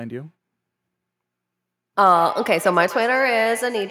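From 2.15 s, feedback echo between two devices: looped playback repeats sound roughly every 150 ms, about 13 dB down, showing as spaced spectrogram copies.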